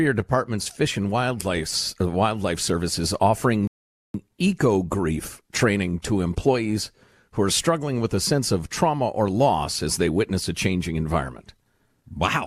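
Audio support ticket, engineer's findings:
Rebuffering stall, 3.67 to 4.14 s. Speech cuts to silence for about 470 ms, then resumes at the exact point it stopped, just before "eco grief training to". No content lost; duration extended. Probable component: client player buffer. Downloaded audio ran out, so playback halted until more data arrived, then continued from the same position.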